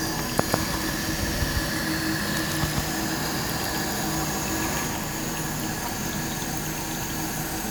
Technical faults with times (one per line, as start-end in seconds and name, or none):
0.49-4.87 doubled audio track